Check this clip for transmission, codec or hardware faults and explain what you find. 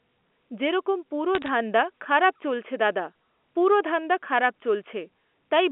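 One transmission fault is audible on this telephone-band speech, which is carried as G.711 A-law and limited to roughly 250 Hz to 3.4 kHz.

Bit errors on a digital phone line occur from 1.35 to 1.48 s, between "যেরকম পুরো" and "ধান্দা খারাপ চলছে দাদা". Scattered flipped bits, a few per thousand, each corrupt a single logarithmic sample, producing a brief burst of sharp ticks and crackle over otherwise intact speech.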